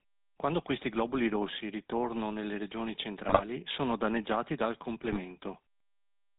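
Throughout, the speech carries the buzzy, gravelly roughness of the GSM full-rate codec, which fits its 13 kbps stream. The vocal tract is rebuilt from a coarse pulse excitation. A spectrogram shows nothing above 4 kHz and a grainy, striated texture in the harmonics.

At 3.26 to 3.45 s and again at 5.01 to 5.17 s, GSM bit errors corrupt the decoder's filter, pitch and gain values, producing squawks and gargling pops. The waveform shows sudden level spikes, and the spectrogram shows smeared, misplaced energy. The first burst sounds harsher.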